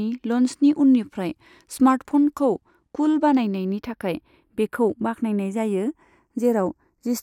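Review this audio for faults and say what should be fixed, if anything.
Channels drifting apart runs through the whole speech clip. The two channels come from separate clocks, off by around 30 ppm. Their offset creeps up to a fraction of a millisecond by the end. Summed to mono, comb notches sweep slowly, heard as flanging. To prevent it, lock both devices to one shared clock, or resample one channel to match the other.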